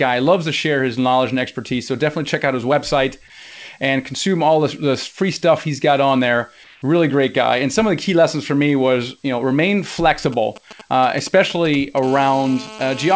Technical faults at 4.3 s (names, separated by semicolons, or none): none